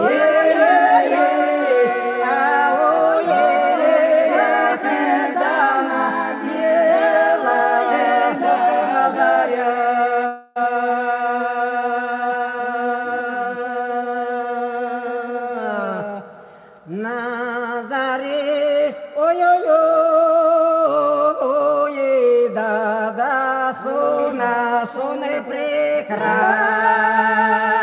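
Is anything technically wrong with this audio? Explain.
Yes. From 10.26 to 10.58 s there is likely a long network dropout. About 300 ms of audio never reached the receiver, and concealment filled almost all of that gap by stretching the last sound. That stretch becomes a fading buzz or hiss rather than silence, and the lost sound is skipped when audio resumes. Throughout the clip nothing is heard above 4 kHz, which fits a G.711 A-law call path.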